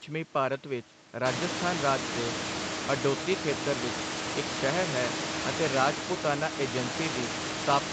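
Listening to the speech here, nothing stood out as a technical problem.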